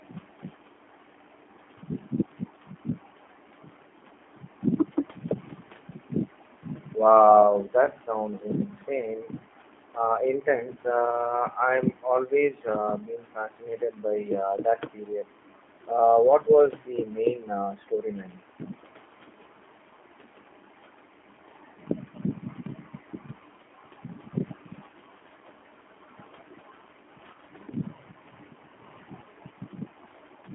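Throughout the speech, the sound is narrow, slightly rough and synthetic, with no bass or treble, plainly audible. This is the G.729 codec at 8 kbit/s: speech rebuilt from a vocal tract model and sparse pulses every 10 ms, confined to roughly 200 Hz to 3.5 kHz.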